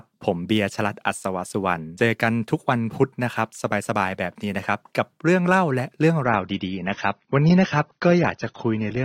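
From 6.24 s to the end, the adaptive stream dropped to a lower bitrate, consistent with AAC falling from about 96 to 24 kbit/s. The speech switches abruptly with no gap: nothing remains above 6.3 kHz, so it turns dull and muffled, with coding artefacts rising.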